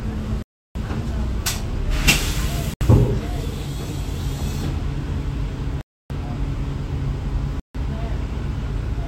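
Bluetooth stalls cut this sound recording to silence four times: 0.42 to 0.75 s, 2.74 to 2.81 s, 5.81 to 6.10 s, and 7.60 to 7.75 s. The likely cause is radio interference delaying packets until the headphones' buffer ran dry, halting playback for 70 to 330 ms.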